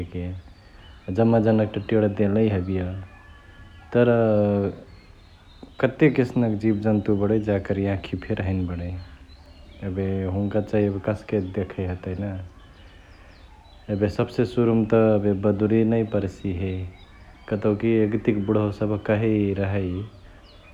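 From start to finish the speech carries sample clock jitter. The converter's clock is wobbling, so each sample lands a touch early or late, somewhere under a microsecond of timing error. On a steep part of the waveform that slip turns into a wrong amplitude, giving a fine hiss-like grit roughly 55 dB down that rides on the louder, brighter syllables and drops away entirely in the pauses.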